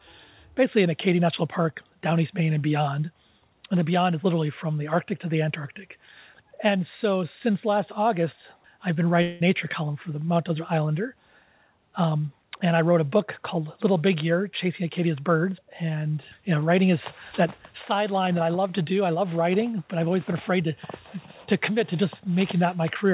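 At 9.22 s the sound gives way to a buzzy, smeared continuation of itself that fades and runs to 9.42 s, after which the audio resumes with roughly 0.18 s of material simply gone. This is most likely a long network dropout: no packets arrived, and the receiver filled the whole gap by stretching the last sound rather than going silent. On a spectrogram the band appears as repeated, blurred harmonic streaks losing energy, cut off at 4 kHz like the rest of the call-path audio, with no true silent gap in the waveform.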